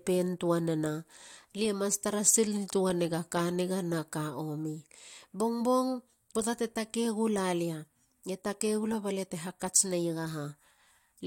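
Speech recording with no audible technical faults anywhere in the clip.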